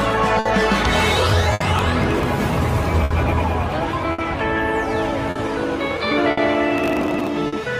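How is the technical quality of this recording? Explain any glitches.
The recording has three kinds of fault: a steady timing drift, seven short stalls, and two bursts of crackle.

Clock drift between sender and receiver runs through the whole clip. The sending side's clock appears to run roughly 5 percent slow, so the receiver's jitter buffer keeps draining. The receiver keeps patching by repeating small pieces. The result is small, irregular timing hiccups scattered across the audio. Unlike a single stall, the hiccups are spread out rather than tied to one moment.

Short stalls from a late packet occur at 0.39–0.47 s (about 60 ms held), 1.53–1.62 s (70 ms), 3.04–3.12 s (60 ms), 4.12–4.20 s (60 ms), 5.30–5.37 s (50 ms), 6.31–6.39 s (60 ms) and 7.47–7.54 s (50 ms). Each time, a packet arrived late, so the receiver stretched the last sound until it came, then resumed where it left off. Nothing is lost. 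Each one is heard as a single sound held unnaturally long, with a faint buzz or dip. That one-off hold sets it apart from the diffuse drift.

Processor overload crackle spans 1.01–2.41 s and 6.76–7.28 s. The processor fell behind and missed deadlines again and again, dozens of them, on buffers of roughly 3 ms. Each missed block was skipped outright, leaving a tiny hard-edged gap. Together the gaps form a gritty tearing laid over the sound that stops once the load eases. It differs from the stalls because it is many tiny skips, not one long hold.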